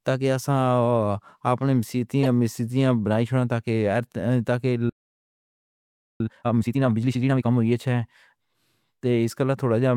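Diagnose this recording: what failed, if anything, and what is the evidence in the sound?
At 2.23 to 2.27 s, just before "سِیٹاں بَنائی تَاں", there's a short glitch about 40 ms long. That's a corrupt frame decoded, and it sits at the codec stage. A couple of compressed frames arrived with flipped bits, and the decoder played them instead of concealing them. Misread gains and codes then put energy at frequencies that have nothing to do with the speech, for roughly two frame lengths.

Right after "اَوَر تَاں کہ" the sound just stops. The output is silent from 4.89 to 6.20 s, a gap of about 1.3 s, and then the speech picks up where it left off. This is a playback stall. The likely cause is the player's buffer running dry or its output thread getting blocked, so nothing reached the output until it recovered. The fault belongs to the playback and buffering side rather than the source.

From 6.20 to 7.50 s the speech comes out hurried, at about twice normal speed, but the pitch stays where it should be. 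That's time-compressed catch-up at the playback stage. Having fallen behind during the stall, the player works off the backlog by cutting out small slices and cross-fading the joins. That keeps the pitch intact.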